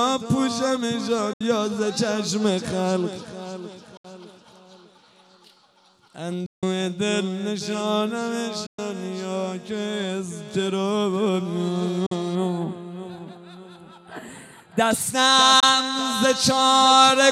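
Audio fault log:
1.33–1.41 s, 3.97–4.05 s, 6.46–6.63 s, 8.66–8.79 s, 12.06–12.12 s, 15.60–15.63 s: Bluetooth dropout, likely cause. The sound vanishes abruptly for about 70, 70, 163, 116, 46 and 23 ms, then resumes as if it had kept playing. The waveform shows flat gaps with sharp edges, and the spectrogram shows blank vertical stripes.
12.35–14.91 s: channel delay (comb filtering). One channel lags the other by a tiny fraction of a millisecond, a few samples, and summing them to mono cancels evenly spaced frequencies from around 5 kHz upward. The sound turns hollow and phasey, and the spectrogram shows fixed horizontal notch bands.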